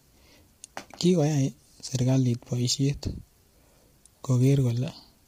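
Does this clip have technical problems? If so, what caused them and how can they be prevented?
Yes. Throughout the speech the voice sounds rough and grainy, with a hiss filling the gaps between harmonics and a dulled, somewhat synthetic top band. This is likely low-delay AAC compression (AAC-ELD) at heavy settings, with damage that fits a bitrate around 24 kbps. Its very short frames cannot separate closely spaced pitch harmonics and spend bits inefficiently. Unlike ordinary AAC, which leaves swirly, warbling artefacts, this damage is a steady coarse graininess. To prevent it, give the low-delay codec a higher bitrate, or use standard-delay AAC where latency isn't critical.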